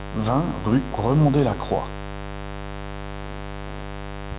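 From start to finish a steady, raspy mains buzz sits fairly loud under the speech, its sharp switching spikes repeating every 10 ms. A spectrogram shows evenly stacked horizontal lines every 50 Hz, running up to where the call path's 4 kHz band limit cuts everything off.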